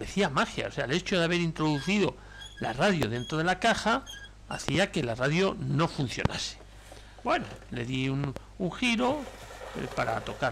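Loud pops at 3.03–3.05 s, 4.69–4.77 s (a double), 6.25–6.28 s and 8.24–8.39 s (another double, a bit softer). Each one sits far above the sound, which carries on underneath. It's likely a voltage spike from a switch, plug or static.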